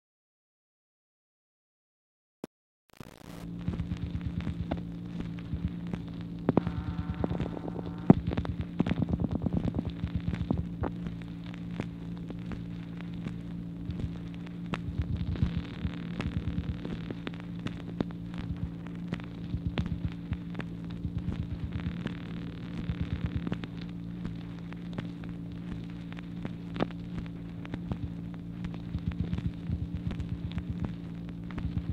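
From 0.0 to 3.44 s, the fade carries truncation distortion. The gain stage behind the fade rounds each sample to too few levels and adds no dither, which fits a word length of about 7 bits. Near the quiet end of the fade, the waveform collapses into a handful of coarse square steps. It sounds gritty and grainy. The grit is worst across this whole opening stretch.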